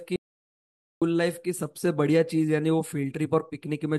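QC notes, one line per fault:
0.16–1.02 s, audio dropout to silence: speech cuts to silence for about 0.86 s, likely a lost input link; flatline waveform, blank spectrogram, no room tone.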